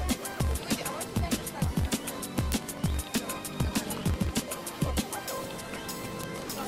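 A block size mismatch (truncated) runs throughout: the tail of each block is discarded, producing a 46.9 Hz buzz and playing the audio 1.12 times fast at roughly normal pitch, which fits a 1024-sample read block. Bit error spikes at 2.52, 3.18 and 6.24 s are each a single sample jumping by a power of two, heard as a sharp broadband tick.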